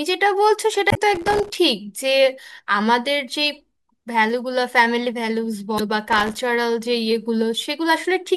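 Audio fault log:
0.88–0.97 s: damaged data in a compressed stream. The decoder hits corrupt frames and loses sync. A short glitch results.
1.15–1.58 s: processor overload crackle. Dozens of very short buffers, around a millisecond and a half each, miss their deadline. Each leaves a tiny silent gap, heard together as gritty crackle.
5.76–5.80 s: damaged data in a compressed stream. Corrupt frames make the decoder search for the next header. The result is a brief blip.
6.08–6.39 s: processor overload crackle. Fewer buffers drop out here, perhaps thirty. Their silent gaps tear through the speech as a shorter burst of crackle.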